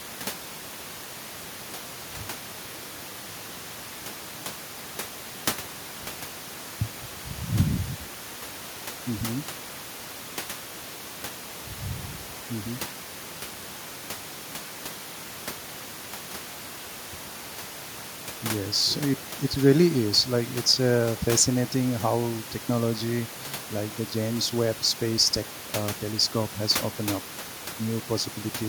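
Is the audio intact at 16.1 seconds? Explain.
Yes, the audio is intact at 16.1 seconds: the speech there is clean, with only the room's own background noise sitting about 12 dB beneath it as part of the recording.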